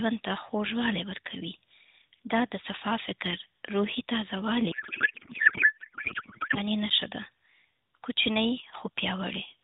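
From 4.7 to 6.6 s a codec payload misread takes over: octet-aligned AMR frames are unpacked as bandwidth-efficient, so every field shifts and the speech turns to garbled warble. On a spectrogram, formant structure vanishes into smeared, patternless energy capped at 4 kHz.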